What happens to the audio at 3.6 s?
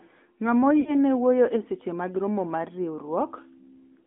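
At 3.6 s you're hearing the AMR narrowband mobile codec, which runs through the whole clip. The speech is squeezed into a 200 Hz to 3.5 kHz phone band and rebuilt from a vocal-tract model, so it sounds thin and buzzy, which fits a mid bitrate near 10.2 kbps.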